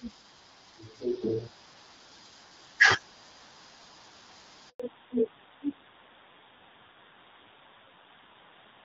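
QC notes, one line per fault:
4.70–4.80 s, handover gap: the speech drops out abruptly, dying away within a few tens of milliseconds into 100 ms of silence before resuming. The call was handed between networks and no speech frames arrived during the switch, so whatever was said there is gone.
4.80 s to the end, fallback to narrowband: the speech loses everything above 4 kHz and sounds duller and rougher than the lightly coded HD Voice before it. The call fell back from wideband AMR-WB to narrowband AMR-NB, and the added roughness fits a low rate near 7.4 kbit/s.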